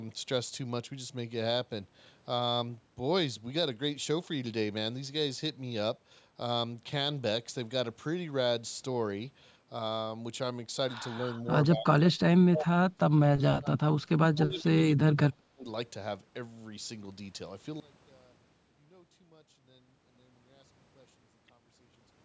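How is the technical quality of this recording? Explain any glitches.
The second half has a clear fault: speech suppressed in double talk, in a cluster from 11.18 to 15.66 s. A slight dip at 11.18–11.46 s is followed by much deeper cuts, roughly 30 dB, at 11.72–12.28, 12.45–13.77 and 14.32–15.66 s, with a brief notch at 13.94–13.98 s. The likely cause is an echo canceller clamping down while both ends spoke, so the speech drops out in chunks. A waveform shows the envelope suddenly collapsing, and a spectrogram shows those spans fading toward blank columns. The spectrum ends near 8 kHz, as expected from call microphone processing.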